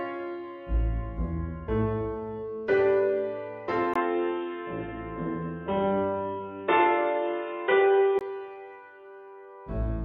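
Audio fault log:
3.94–8.21 s input switched to a poorer device: a 20 ms waveform gap, then boxy sound with nothing above 3.8 kHz, faint new hiss, roughly 5 dB level step, likely another microphone.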